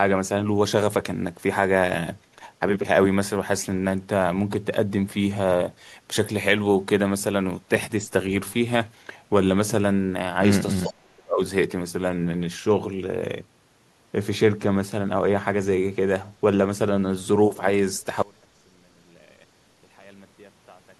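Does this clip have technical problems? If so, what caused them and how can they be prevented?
Yes. Speech suppressed in double talk, from 10.84 to 11.4 s, likely came from an echo canceller that could not tell the near talker from loudspeaker echo while both sides spoke, so it turned everything down. The speech sinks by as much as about 35 dB across roughly half a second. A canceller with better double-talk detection, or a headset instead of a loudspeaker, prevents this.

An echo leak from 10.86 to 10.93 s likely comes from a far-end canceller on a loudspeaker phone that failed to remove all of its microphone pickup and sent a scrap back. It returns as a brief copy delayed by 436 ms, about 20 dB below the speech. Headphones at the far end, or a canceller that converges faster, stop the leak.

An audio dropout to a faint residue begins at 18.22 s and runs to the end, likely because the signal source was lost while the path after the break stayed open. 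The speech cuts off abruptly, leaving only faint sound about 30 dB below the normal level. Stable connections and cables, with the link monitored for lost input, prevent it.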